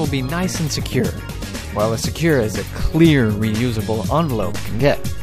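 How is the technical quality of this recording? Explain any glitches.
The recording has one glitch, a DC step near the end. At 4.40 s a low thump is heard, while the sound itself carries on unchanged. Its cause is the waveform's zero line suddenly jumping to an offset of about -24 dBFS, then holding there until the clip ends. A converter recalibrating or an input with a built-in offset being switched in mid-recording would produce this kind of abrupt baseline shift.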